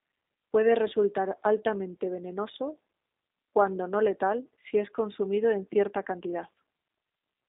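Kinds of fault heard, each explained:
G.729 codec: The speech sounds boxy and slightly rough, with a buzzy, synthetic edge and nothing above about 3.7 kHz or below 250 Hz. An 8 kbit/s codec, G.729A, plainly rebuilds each 10 ms frame from a vocal tract filter, pitch predictor and a few pulses.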